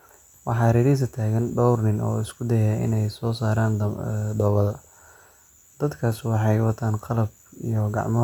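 No technical fault can be heard anywhere in the speech. Nothing in the audio points to a problem in the chain that recorded or carried it.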